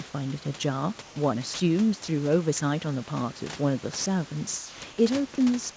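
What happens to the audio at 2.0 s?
At 2.04 to 2.08 s, the speech briefly gives way to a flat bed of steady noise for 40 ms, then returns. This is likely sound dropped by the voice detector. The sender judged that stretch as background and stopped sending, so the receiver filled the gap with comfort noise.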